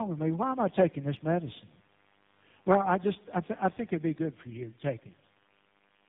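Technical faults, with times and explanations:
Throughout: tandem speech coding. The speech sounds like it passed through about three speech coders in a row, ending in something that fits AMR-NB. Each decoded and re-encoded the previous coder's output, so their errors stack into roughness, muffling and a watery warble. On a spectrogram the energy stops sharply at 3.8 kHz, and the harmonics look smeared and blotchy with broken formant tracks. The waveform looks coarse and uneven.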